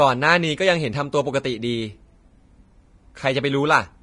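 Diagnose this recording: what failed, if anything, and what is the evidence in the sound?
The speech sounds hissy and grainy throughout, with sibilants turned to a rough wash and consonant onsets smeared. The top of the spectrum is cut off. This points to the codec stage, likely Vorbis compression at a low setting, around 30 kbps. At that rate the encoder lowers its cut-off and quantises the upper residue so coarsely over the spectral floor that fine treble detail is replaced by noise of similar energy.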